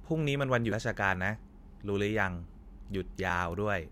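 At 0.72 s and 3.3 s the speech jumps ahead, losing roughly 70 ms, then about 20 ms. This is likely a dropped buffer (overrun), with samples overwritten before being read. The waveform shows an abrupt splice with no gap, and the spectrogram a thin vertical line.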